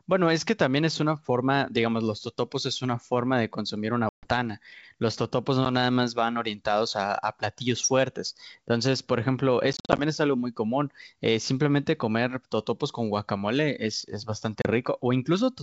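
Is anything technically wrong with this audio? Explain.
Yes, there's packet loss on an ADPCM call at 4.09–4.28 s (140 ms missing), 5.65–5.67 s (10 ms), 9.73–9.99 s (140 ms scattered over 260 ms, longest gap 50 ms) and 14.62–14.66 s (30 ms). Each gap is abrupt silence. The decoder's predictor and step size then lose track of the sender's, so the speech comes back slightly distorted before settling.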